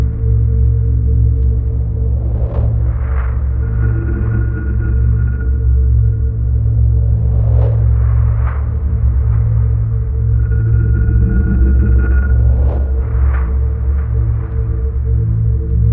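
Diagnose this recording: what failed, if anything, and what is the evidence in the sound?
No failure detected anywhere.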